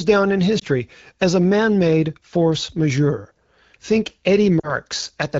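Lost AMR speech frames cause two dropouts in this speech recording. The first, at 0.59 to 0.64 s between "down in" and "as a man made", is a brief dip that fits a single 20 ms frame. The second, at 4.59 to 4.77 s, sounds like about 40 ms of missing audio. For each corrupted frame the wideband decoder repeats the last good pitch and vocal-tract settings at falling gain, which smears the sound before it recovers.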